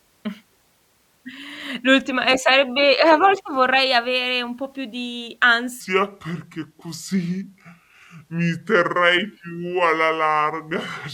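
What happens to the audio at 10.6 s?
At 10.6 s the speech sounds deep, slowed and drawn out, roughly seven semitones low. This is a section at the wrong speed, running from 5.81 s after "un po' più di" to the end at 0.692 times normal speed, likely from playback against the wrong clock.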